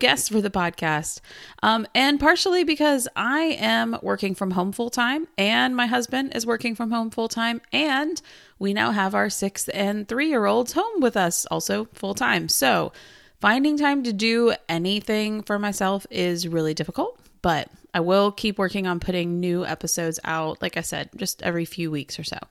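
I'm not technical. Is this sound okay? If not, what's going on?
Yes, nothing wrong can be heard in this recording.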